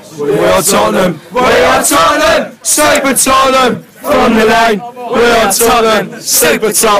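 From the first moment to the end, the audio suffers hard clipping: it is driven about 16 dB beyond what a stage in the chain can pass, so nearly a third of the samples hit the ceiling and are sliced off flat. On a waveform the loud stretches look like blocks with squared, plateaued tops; a spectrogram shows a haze of added harmonics spreading high up the spectrum. The overload is heavy enough that every loud passage carries a harsh, gritty fuzz.

At 2.95 s a single sharp snap cuts in on top of the sound, an electrical switching spike, likely a nearby switch, relay or static discharge arcing and being picked up by the audio line. It lasts only a few milliseconds. In the waveform it appears as a narrow needle standing out from the surrounding signal, and on a spectrogram as a thin vertical stripe reaching across nearly the whole frequency range.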